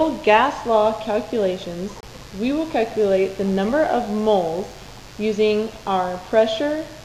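A raspy mains buzz sits under the whole audio, locked to 50 Hz and running at about 25 dB below the signal. It's not a smooth hum. Something like a dimmer, a rectifier or an unshielded lead is injecting sharp switching spikes twice per mains cycle, and those spikes spray harmonics of 50 Hz well up into the kilohertz range, which is where the gritty edge comes from. Separately, there's a corrupt frame muted at 2.01 to 2.04 s. The sound cuts to dead silence abruptly for about 38 ms and then picks up again with timing intact. That length points to a single compressed frame that arrived with flipped bits, which the decoder rejected and the player filled with silence rather than let garbage through.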